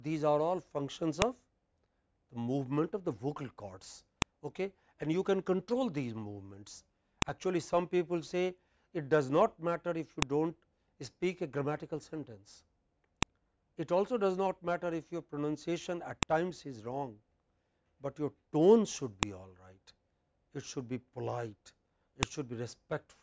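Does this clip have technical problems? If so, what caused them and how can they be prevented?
Yes. Separate WAV pieces, each 3 s long, were joined with their headers left in, so those header bytes play as samples: a file header played as audio, heard as a sharp snap at 1.22, 4.22, 7.22, 10.22, 13.23, 16.23, 19.23 and 22.23 s. Strip each piece's header and concatenate only the sample data before playback.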